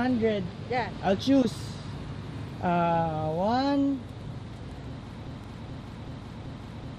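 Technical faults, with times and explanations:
Throughout: MP2 compression. The sound is dull, with a gurgling, grainy edge. This is likely from MPEG Layer II coding at a rate around 80 kbps. Starved upper sub-bands switch off and flicker, so a spectrogram shows a ragged, blocky top edge with bands winking in and out.
1.42–1.45 s: DAB burbling. A few brief watery blips break into the sound. Bit errors slipped past error correction into what sounds like a few MP2 frames, corrupting samples so short blips of noise land in single sub-bands. A spectrogram shows isolated bright rectangular patches stacked in narrow bands.
2.39–2.44 s and 5.44–5.49 s: overlapping chunks. A small stutter-click recurs 3 s apart. Each processing chunk begins 48 ms before the previous one ended, so that sliver plays twice at each join. The waveform shows a short repeated segment with a discontinuity at its start.
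5.27 s to the end: broken-record loop. A 380 ms fragment repeats back to back to the end, likely because the player or stream stalled and kept re-sending its last buffer. The audio for that span is lost. The waveform and spectrogram show an identical pattern tiling exactly every 380 ms.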